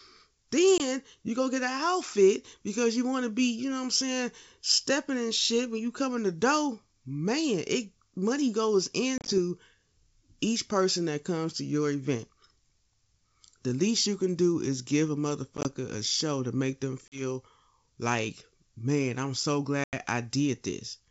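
Speech with packet loss on an ADPCM call at 0.78, 9.18 after "it money goes", 15.57, 17.08 and 19.84 s: dropped packets leave hard-edged gaps, and the mistracking decoder returns slightly distorted speech.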